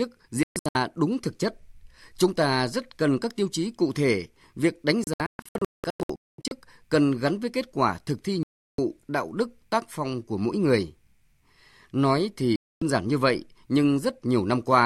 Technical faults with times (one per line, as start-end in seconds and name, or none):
0.43-0.75 digital broadcast dropout
5.04-6.51 digital broadcast dropout
8.43-8.79 digital broadcast dropout
12.56-12.82 digital broadcast dropout